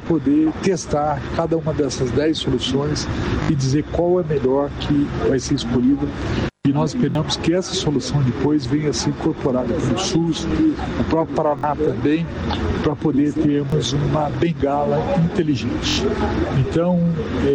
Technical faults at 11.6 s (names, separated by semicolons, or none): repeated buffer